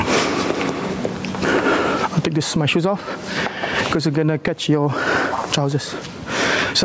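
Gain pumping runs throughout: the gain ducks by roughly 15 dB under each loud sound, flattening the dynamics, likely from input gain set far too high with a fast limiter pulling it back.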